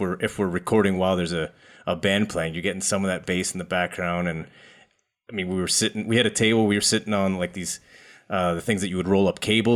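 Speech recording with no technical fault to point to. Nothing in it calls for a time or a cause.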